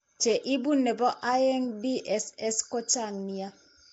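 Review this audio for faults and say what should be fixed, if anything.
The speech carries a rough, hissy halo and a smeared, underwater character for its whole length, and nothing is present above about 7.7 kHz. This is likely Nellymoser compression, the old Flash microphone codec, working at a rate that sounds around 32 kbps. It spends a fixed, small bit budget on each short block, so weaker bands receive nothing and are filled with noise, which produces the hiss and smearing. To prevent it, record or transcode with a modern codec such as Opus or AAC at an adequate bitrate, or keep an uncompressed source.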